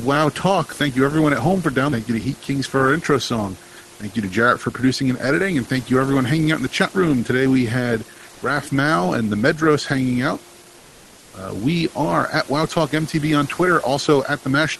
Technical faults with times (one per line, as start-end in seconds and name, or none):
10.78-11.33 comfort noise in place of the background